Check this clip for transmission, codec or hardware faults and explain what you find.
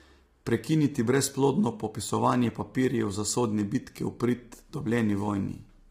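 One codec fault runs through the whole speech clip: heavy low-delay AAC compression, likely from AAC-ELD at a low bitrate that fits roughly 24 kbps. Its short frames resolve pitch harmonics poorly, so the voice turns rough and grainy. A spectrogram shows noise filling the gaps between harmonics and a thinned or smeared top band.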